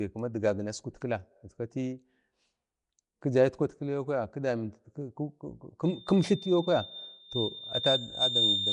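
Right from the start the speech sounds rough and hissy with a smeared, underwater edge and nothing above 10.6 kHz, likely Nellymoser compression at something like 44 kbps. At 5.84 s a loudspeaker feedback squeal starts: a 3.6 kHz tone, caught in a mic-to-speaker loop, swells over roughly two seconds until it's louder than the speech and runs to the end.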